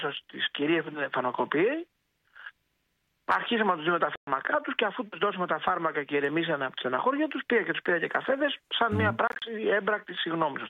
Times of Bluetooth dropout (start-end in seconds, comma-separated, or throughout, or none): 4.16-4.27, 9.27-9.42